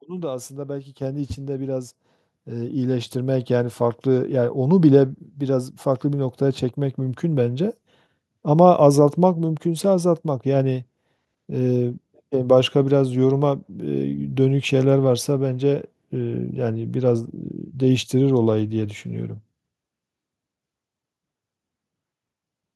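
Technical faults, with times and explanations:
1.02 s and 2.04 s, microphone volume stepped up: the input level jumps in two single steps, by about 7 dB and then about 5 dB, as the software raises the device volume. The speech and the background noise rise together, and stay louder, which distinguishes this from someone moving closer to the microphone.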